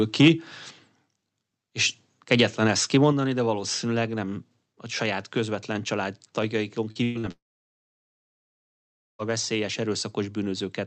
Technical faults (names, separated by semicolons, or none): microphone overload; microphone volume stepped down; short concealed packet loss; burst of packet loss; long network dropout